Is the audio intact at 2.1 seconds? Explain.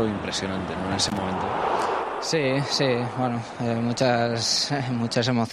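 Yes, the audio is intact at 2.1 seconds, with no dropout, click, distortion or other fault at that moment.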